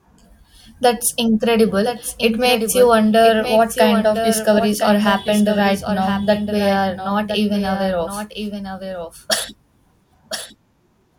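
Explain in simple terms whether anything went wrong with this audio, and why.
Something did go wrong: the speech has a doubled audio track running through the whole clip. A second, quieter copy of the same speech plays about a second behind the original, so every phrase is followed by a faint repeat that overlaps what comes next. It isn't an echo from a room, because the repeat has no fading tail and sounds just as clean as the original. It was likely caused by the sound being captured twice, once through a slower path.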